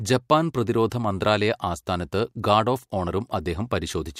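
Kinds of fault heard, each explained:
Pre-echo: The codec kept a long transform window, which fits a block of about 26 ms, and never seems to switch to short blocks at the attack. The quantisation noise sized for the loud onset was therefore spread back over the quiet moment before it. From 0.90 to 0.92 s, just before "മന്ത്രാലയ ആസ്ഥാനത്ത് ഗാർഡ് ഓഫ്", a hiss rises about 20 dB above the background for 20 ms, and the attack sounds softened and smeared.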